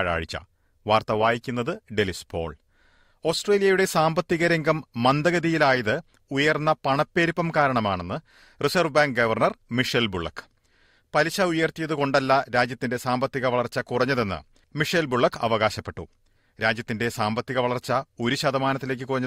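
Nothing stood out on listening; no technical problem could be heard anywhere in the recording.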